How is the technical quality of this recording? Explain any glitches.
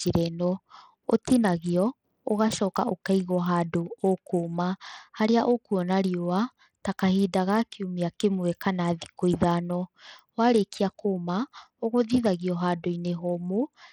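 The recording has clearly audible codec damage from start to finish. Throughout the speech, the treble flickers in and out, and a gritty, grainy noise clings to the sound. This points to Bluetooth SBC compression, likely at a low rate around 80 kbps. With so few bits, the upper sub-bands starve and the rest are coarsely quantised. Unlike MP3 swirl or a clean low-pass, the top end sputters unevenly, and aliasing grit sits on the sound.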